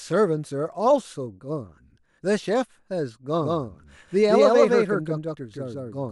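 Speech, with a doubled audio track from 3.41 s to the end. A second full-band copy follows about 150 ms behind, at roughly the same level. It starts abruptly and carries no decay or room colour. The likely cause is a slower second capture path or misaligned edit.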